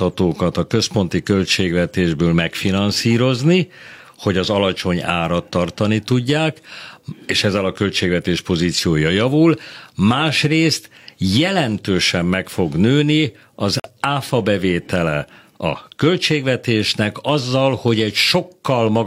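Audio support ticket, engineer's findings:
Corrupt frame muted, 13.80–13.90 s: speech drops to hard digital silence for about 0.11 s, clean abrupt onset. Decoder in the playback path rejecting damaged compressed frames; player substitutes silence. Gap length points to two consecutive lost frames. Distinct from packet-loss concealment (no smeared or repeated fill) and from a buffer underrun (timing intact, no stretch or catch-up afterwards).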